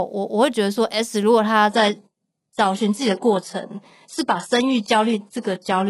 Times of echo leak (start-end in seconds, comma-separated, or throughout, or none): none